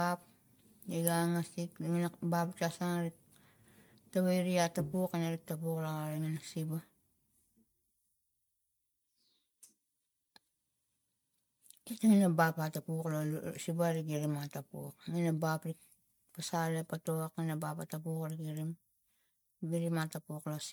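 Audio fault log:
throughout, generation loss: the speech sounds swirly, hollow and smeared, with softened consonant attacks, more degraded than a single MP3 pass at a rate that fits 128 kbit/s would leave. The likely cause is repeated MP3 decoding and re-encoding, perhaps around seven times, each pass adding fresh quantisation noise on a shifted frame grid. A spectrogram would show accumulated holes and flickering patches across the band, with nothing above 20 kHz, and the waveform's transient edges look rounded.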